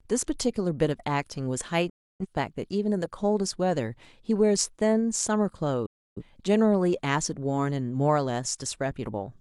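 At 1.89 to 2.26 s and again at 5.86 to 6.22 s, the speech drops out. This is a digital broadcast dropout: the receiver muted on corrupt or missing frames, fading out within 8 ms, with roughly 0.3 s of programme lost each time, consistent with seven frames.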